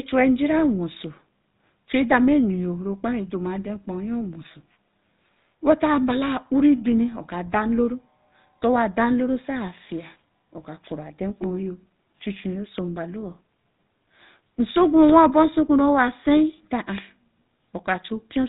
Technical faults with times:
0.00-18.49 GSM full-rate codec

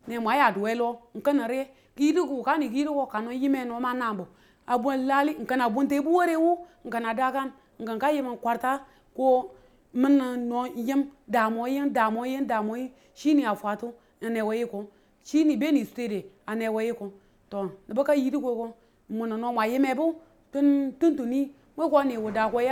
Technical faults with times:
none

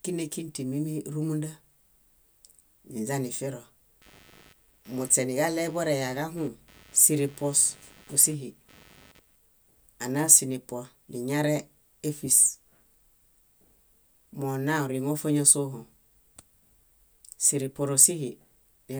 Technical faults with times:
4.02-9.36 computer activity noise

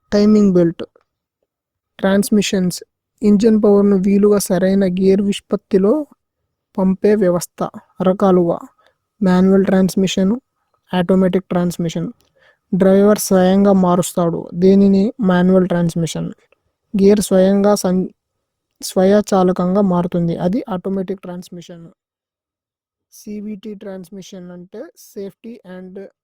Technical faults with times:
20.43-21.79 zipper noise

